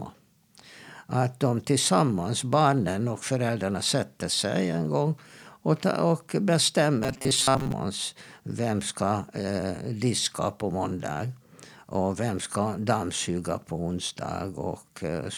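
From 7.04 to 7.72 s the speech turns into a rigid metallic buzz at 133 Hz: robotic sound from repeated short buffers, likely caused by a roughly 7.5 ms chunk being replayed through most of that span. Unlike a stutter, the repeats are too short to hear separately.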